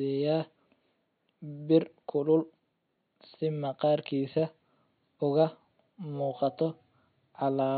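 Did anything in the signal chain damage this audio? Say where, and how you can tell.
No, the signal chain caused no damage.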